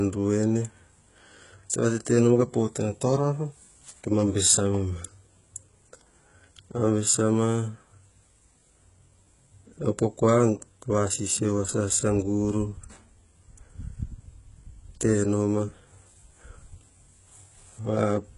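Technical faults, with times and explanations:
Throughout, HE-AAC compression: heavy damage, with nothing above 11.1 kHz and sibilants sounding gritty and metallic. The likely cause is a coder at a rate that fits about 12 kbps, which rebuilds the treble by copying lower bands upward, so harmonics misalign across the crossover.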